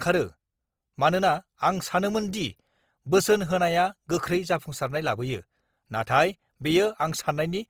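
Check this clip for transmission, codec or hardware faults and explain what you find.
One codec fault runs through the whole speech recording. Opus compression, from start to end: the grain points to Opus in its CELT music mode, at a rate that fits roughly 24 kbps, with fullband bandwidth kept. With too few bits for every band, the encoder still preserves each band's energy. It fills the starved bands by copying lower ones or inserting noise, which leaves few spectral holes or swirls. Instead, the tonal parts of the voice come out rough, noisy and grainy, and the damage is plainly audible throughout. The encoding is the likely cause of this sound.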